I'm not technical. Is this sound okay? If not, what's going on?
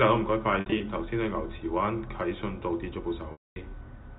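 No. There is packet loss with pitch repetition, at 0.6 to 0.8 s and again at 3.32 to 3.56 s. Small chunks of the sound went missing in transit, and the receiving end papered over each gap by repeating the last tiny slice of the sound. In the first spot the gaps are brief and scattered, so the sound briefly holds and buzzes. The second is a solid quarter-second hole, so the repeat fades to silence before the speech resumes.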